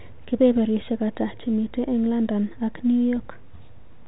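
No faults in this speech clip; the G.711 mu-law telephone coding holds the band below 4 kHz, with at most a faint quantisation hiss tracking the level.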